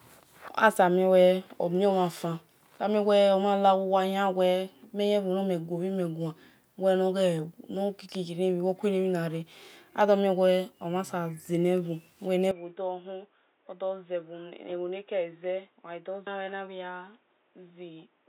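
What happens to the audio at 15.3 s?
At 15.3 s the speech sits inside a stretch that begins at 12.51 s and runs to the end. The sound turns dull and boxy, with nothing above 3.8 kHz. It also drops to a noticeably quieter level, roughly 10 dB down. A new, faint noise floor appears well below the speech. There is no gap at the change. This points to the input switched to a poorer device, likely a narrower-band microphone or headset profile taking over.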